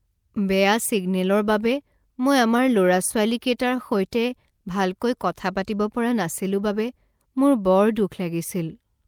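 From 2.23 to 3.15 s, just after "ছিগনেলৰ বাবে", there are scattered short gaps. About five packets went missing or arrived late, each patched by continuing the preceding sound for at most about 15 ms. They are heard as brief ticks and smears. A waveform shows tiny repeated fragments, and a spectrogram shows brief smeared columns.

From 3.50 to 4.52 s, ending right before "ভালকৈ কথা পাতিব পৰা", a jitter buffer slow-down stretches the speech to 95% speed by repeating pitch periods, adding 53 ms. The pitch stays put while sounds drag slightly. On a spectrogram the harmonics look horizontally elongated. The waveform shows cloned cycles.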